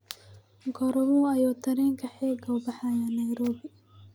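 Speech recording with no audible technical faults anywhere.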